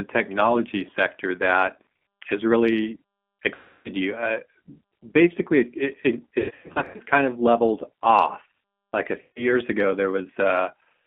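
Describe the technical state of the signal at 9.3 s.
At 9.3 s the speech is stretched into a buzzy tone or coloured noise that fades away. This is VoIP packet loss concealed by the speech codec, spanning 9.21 to 9.49 s. Around 150 ms of audio was lost, and the decoder repeated its last pitch and filter at falling gain, so the weakened sound lingers after packets resume.

Beneath that, the speech has the slightly rough, synthetic texture of the G.729 codec at 8 kbit/s, confined to roughly 200 Hz to 3.4 kHz. The speech is rebuilt from a vocal tract filter, a pitch predictor and a few pulses per frame, which leaves the codec damage plainly audible.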